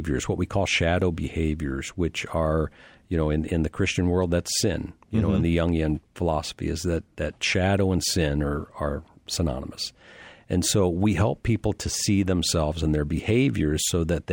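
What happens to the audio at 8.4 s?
A faint metallic shimmer rides on the sibilants and the top of the band sounds dulled, as it does across the whole clip. This is imaging from linear upsampling. The sound fits a rate raised from 24 kHz to 44.1 kHz by straight-line interpolation, a weak filter that leaves a mirrored copy of the spectrum between 12 kHz and 24 kHz, roughly 30 dB below the signal, while softening the content just under 12 kHz.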